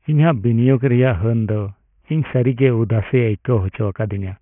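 Aliasing runs through the whole speech clip. The spectrum stops hard at 3 kHz, which points to resampling down to 6 kHz without an anti-alias filter. Content above 3 kHz folds back as unrelated tones, roughly 25 dB below the speech, leaving sibilants gritty and metallic.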